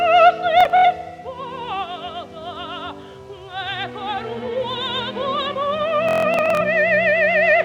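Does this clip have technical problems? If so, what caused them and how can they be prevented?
Yes, there's Bluetooth stutter twice, from 0.61 to 0.85 s and from 6.09 to 6.62 s. Packets arrived late or not at all, so the receiver kept replaying its last short slice, giving a buzzy machine-gun repeat before the sound jumps ahead. The first burst points to about 140 ms of missing audio, with the longest gap at 70 ms. The second is worse, with about 300 ms missing and one 160 ms run. To prevent it, keep the devices close with a clear line of sight, away from crowded 2.4 GHz traffic, or use a wired connection.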